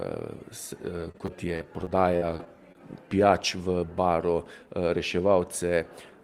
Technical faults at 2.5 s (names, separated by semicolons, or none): repeated packet loss (robotic sound)